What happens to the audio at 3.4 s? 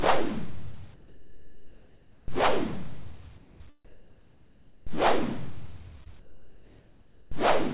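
From 3.38 s to 3.6 s the sound cuts out and a steady, featureless hiss fills the 220 ms gap before the sound returns, with about 150 ms of actual sound lost. This is most likely sound dropped by the voice detector: the sending side took this stretch for background, stopped transmitting, and the receiver filled the hole with generated comfort noise until the detector triggered again. The hiss is band-limited to 4 kHz, matching the narrowband call path.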